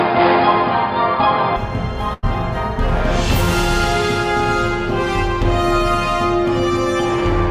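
From 0.00 to 1.56 s the sound is dull and boxy, with nothing above 5 kHz, a faint new noise floor and a level change of roughly 5 dB. The input has likely switched to a poorer device. At 2.13 to 2.25 s there is a burst of packet loss. The last sound is held and faded for 92 ms, then the audio resumes with 80 ms missing.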